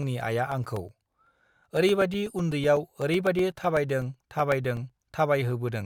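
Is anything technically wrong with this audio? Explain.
Yes. From 0.52 s to 4.90 s the speech carries periodic USB or driver dropouts. Every 0.125 s, eight times a second, something stalls the audio path and roughly 2 ms of signal is replaced by silence, some forty gaps in all. Each abrupt cut and restart gives a small, evenly paced tick wherever speech is present. On a waveform these show as tiny flat notches at regular spacing; a spectrogram shows thin, evenly spaced vertical broadband streaks.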